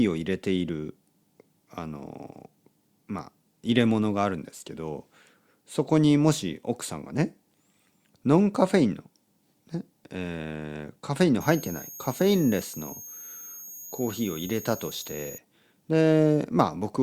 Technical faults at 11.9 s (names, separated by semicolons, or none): switching supply whistle